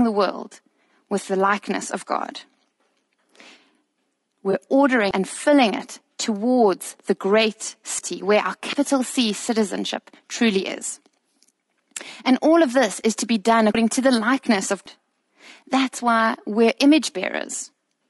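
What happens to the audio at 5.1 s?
At 5.11 s, just before "and filling it towards", the sound jumps forward. This is a dropped buffer (overrun): the program likely failed to collect its samples before the hardware overwrote them. About a tenth of a second of audio is lost, and the two sides are joined with no gap. That missing silence is what separates it from a dropout, where the sound would stop and then resume.

Under that jump, and through the whole clip, the speech has a rough, grainy quality. There is noise between the harmonics and a top band that sounds lowered or synthetic. This is plainly audible low-delay AAC compression, likely AAC-ELD at a rate that fits about 32 kbps. Unlike a lost buffer, this damage is steady rather than tied to one moment.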